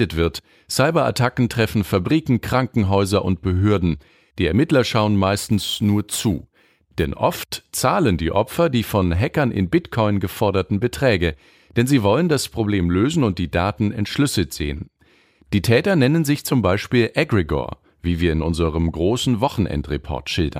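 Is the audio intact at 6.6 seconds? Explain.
No. From 5.38 to 7.05 s, just before "oft zahlen die", there is crude rate conversion. The speech was taken from 32 kHz to 44.1 kHz by repeating nearest samples with no filter. This leaves an inharmonic, gritty fizz, roughly 20 dB below the speech.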